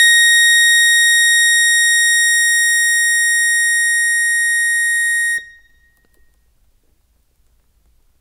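The music arrives as a continuous, intact signal with no technical faults audible anywhere in the clip.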